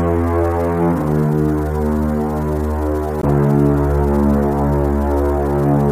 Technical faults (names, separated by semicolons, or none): low bit depth without dither; damaged data in a compressed stream